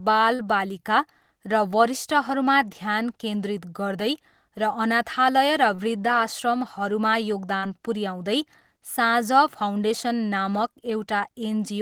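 Short concealed packet loss hits this speech at 0.35, 5.75 and 7.58 s, just after "र वृद्धाश्रमहरूमा": each time about 40 ms went missing, and the receiver extended the preceding sound, leaving a brief smear.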